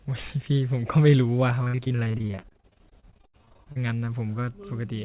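From 1.64 to 3.79 s, the call's packets kept going missing or arriving too late, with dozens of separate gaps across that stretch. The longest was about 78 ms. Each time, the receiver bridged the hole by stretching the last piece of speech it had, and roughly 41% of the span ended up patched this way. That is repeated packet loss, and it makes the speech choppy and robotic, with pieces dropping out. Throughout, nothing above 4 kHz comes through, which fits a narrowband G.711 call codec.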